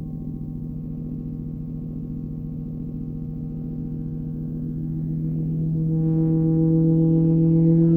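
From 0.77 to 4.30 s the treble goes dull and a gritty grain rises, then clears. It returns at 7.15 s and lasts to the end. Both are a Bluetooth SBC bit pool drop. A congested link made the sender shrink its bit budget, which fits a fall from bit pool 31 to 14, near 99 kbps. That starves the top sub-bands and coarsely quantises the rest until the rate recovers.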